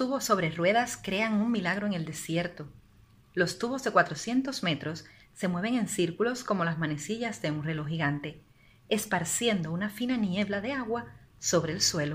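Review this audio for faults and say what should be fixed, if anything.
Nothing needs fixing, as the signal holds steady throughout with no audible technical problems.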